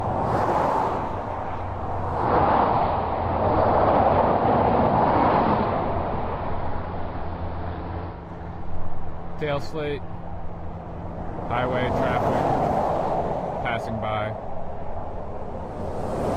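From 2.07 s to 8.31 s the audio shows digital radio blending to analogue: the receiver lost its digital stream and cross-faded, over about a quarter second (248 ms), to the station's AM broadcast, then faded back. AM's narrow bandwidth dulls the treble, the level shifts by about 3 dB, and hiss sits roughly 35 dB under the signal. Unlike a simple filter or dropout, all three changes arrive together with a smooth fade and reverse just as smoothly.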